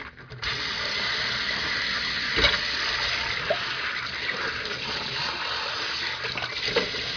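A recording of everyday sounds, with nothing technically wrong to point to at any time.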